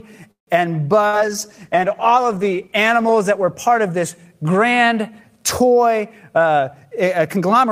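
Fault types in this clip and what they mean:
call audio freeze: At 0.31 to 0.50 s the sound stretches into a brief fading continuation and then stops dead for about 120 ms before carrying on where it left off. This is likely a jitter buffer running dry while packets were held up. Nothing is lost, but about 157 ms of extra gap and delay is inserted. On a waveform it shows as a decaying tail followed by a flat stretch. On a spectrogram it shows as smeared frames and then a blank column.
call bitrate drop: From 1.04 to 4.31 s the encoder is pushed from 48 kbps down to 16 kbps and stays at the lowest rate for about 1.9 s. With so few bits the coding becomes coarse and the sound turns rough and watery, with a duller top end. A spectrogram shows the upper band thinning out and patchy, blocky energy. The waveform envelope changes little, so the fault is mainly visible in frequency content.
burst of packet loss: At 1.07 to 1.16 s, within the low-bitrate stretch, a run of packets never arrives in time. 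The receiver extends the last sound for about 58 ms, letting it die away. Playback then resumes roughly 60 ms further on, so that part of the audio is gone. On the waveform this appears as a shrinking, repetitive segment joined to a sudden restart. On the spectrogram it shows as a frozen, fading slice before an abrupt resumption.
jitter buffer speed-up: From 6.41 s to the end, the receiver trims a surplus of buffered audio by cutting out many tiny pitch-period pieces. This makes playback run at about 111% speed without any shift in pitch. Around 150 ms is removed in total, so the sound feels hurried. A spectrogram keeps the same frequencies but compresses events in time. The waveform shows periods spliced together with the same spacing but fewer of them.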